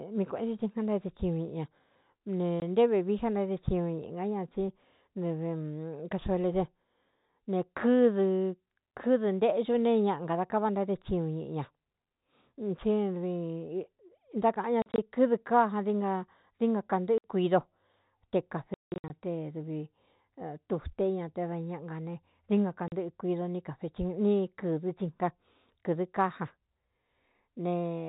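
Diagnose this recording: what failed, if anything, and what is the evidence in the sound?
Network stage: packet loss filled with silence. Hard-edged gaps occur at 2.6, 14.82–14.98, 17.18–17.24, 18.74–19.1 and 22.88 s. Each hole is a multiple of 20 ms, which fits 20 ms packets. True silence rather than smeared repeats rules out concealment, while the G.711 telephone coding is working normally.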